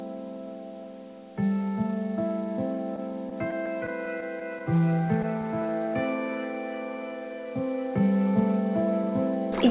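Between 2.96 and 4.79 s there are scattered short gaps: about ten tiny holes where packets arrived late or not at all. The receiver filled each one by stretching the preceding sound, so they come out as brief ticks and small smears rather than silences. Each patch is only around 15 ms at most and together they cover roughly a tenth of a second. That spacing marks it apart from a single long dropout, which would leave one audible hole. The G.711 mu-law call path's band limit, with nothing above 4 kHz, remains throughout.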